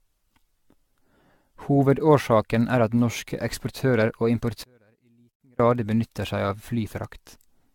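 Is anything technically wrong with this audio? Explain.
Yes, there are two faults.

Generation loss runs through the whole clip. The speech was likely decoded and re-encoded with AAC-LC at around 96 kbit/s, roughly ten times over. Each pass requantises the signal on a shifted frame grid, so the coding noise and spectral gaps compound. The result sounds swirly, smeared and hollow, worse than a single 96 kbit/s encode would, with blurred consonant attacks and nothing above 17 kHz.

One channel inverted affects 4.64 to 5.60 s, ending just before "grad benytter seg av". For that stretch one stereo channel likely has its polarity flipped. Summed to mono, the material shared by both channels cancels, so the centred speech drops by about 36 dB and nearly vanishes. Only a faint residue of the channel difference remains until normal polarity returns.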